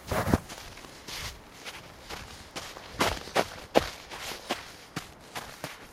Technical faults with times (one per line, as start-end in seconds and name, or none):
none